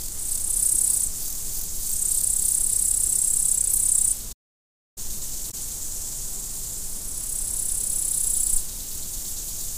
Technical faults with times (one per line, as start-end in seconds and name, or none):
4.32-4.98 playback stall
5.47-5.54 damaged data in a compressed stream